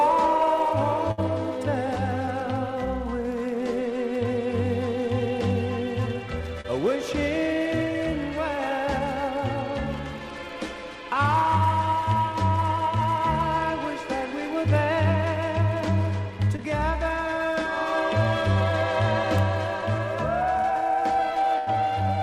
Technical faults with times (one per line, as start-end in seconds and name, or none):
1.11-1.20 burst of packet loss
2.26-2.29 short concealed packet loss
6.61-6.66 short concealed packet loss
16.56-16.60 short concealed packet loss
21.58-21.69 burst of packet loss